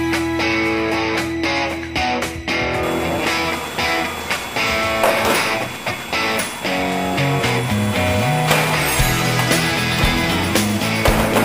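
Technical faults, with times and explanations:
4.40–4.44 s, chunks out of order: a 20 ms chunk plays one chunk late, swapped with its neighbour, so the audio briefly jumbles with three abrupt joins. Unlike a dropout or a repeated chunk, nothing is missing or doubled, only reordered.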